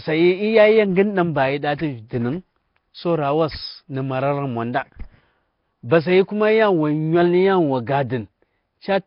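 From start to finish, the speech carries a rough, hissy halo. Vowels sound smeared and watery, as if heard underwater. Nothing is present above 5.3 kHz. This is likely Nellymoser compression, the old Flash microphone codec. It codes short blocks of samples with very few bits. Quiet frequency bands get no bits at all and are filled with noise instead. The damage here is heavy, which fits a low bitrate near 22 kbps.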